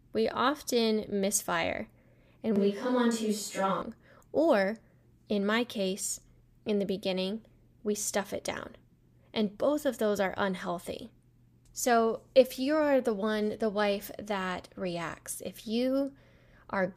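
Speech, with a switch to a distant microphone from 2.56 to 3.82 s, right after "we often misfire and": the sound turns abruptly roomy and thin at roughly the same level, likely from a failed close mic. On the spectrogram, the low frequencies weaken and the reverberant tails blur.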